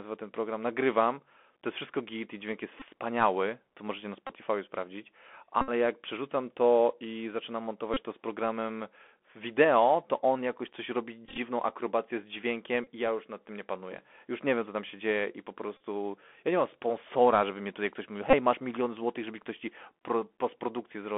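The whole clip of speech has gone through the Bluetooth CVSD headset codec, and the damage is plainly audible. The line band runs from roughly 250 Hz to 3.5 kHz, so everything sounds boxed into a phone channel. CVSD sends one bit per sample, just up or down, with an adaptive step, so loud high sounds outrun it and smear, s sounds go scratchy, and a grainy hiss sits under the speech.

On top of that, there are Bluetooth headset packet repeats. Voice packets between headset and phone were dropped, and the chip replayed the previous packet's bits. Back-to-back repeats cycle every 3.75 ms, which gives a buzz near 267 Hz while the gap lasts. They land at 2.80 s (about 19 ms lost), 4.27 s (about 23 ms), 5.61 s (about 64 ms, the longest solid stretch of buzz), 7.94 s (26 ms), 11.25 s, 12.84 s (26 ms), 15.77 s (34 ms) and 18.30 s (26 ms). The one at 11.25 s is different: about 68 ms of losses are scattered over 120 ms, with no run much longer than 15 ms, so it comes across as a choppy patch rather than one steady buzz.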